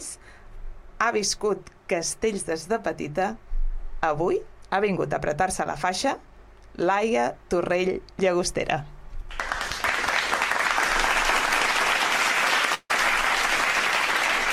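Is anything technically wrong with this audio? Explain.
Yes, there are two faults. A short concealed packet loss at 5.64 s: a few milliseconds of audio arrived too late, and the receiver patched the gap by extending the preceding sound, leaving a brief smear. A long network dropout at 12.74 to 12.91 s: the sound trails off as a fading continuation and briefly drops to silence before resuming with part of it missing, likely because no audio reached the receiver for about 0.15 s.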